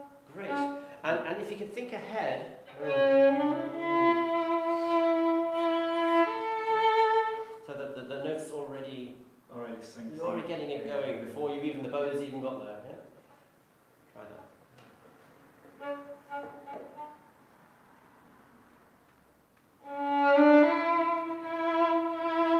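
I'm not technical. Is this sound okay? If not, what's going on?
Yes, this one sounds fine, with nothing jumping out as broken or glitchy anywhere along the way.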